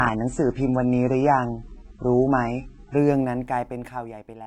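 From 0.0 to 2.97 s the speech plays as an adaptive stream starting at a low bitrate. Nothing is present above 8.3 kHz, and codec artefacts are pronounced, which fits a stream of around 16 kbit/s. At 2.97 s the treble and clarity return abruptly, with no gap, consistent with a step up to roughly 96 kbit/s.

From 3.14 to 4.46 s the level falls by roughly 20 dB in coarse 3 dB steps, about five per second, with no smoothing between them. Each step leaves a small click, so a ticking zipper noise rides on the speech throughout the fade.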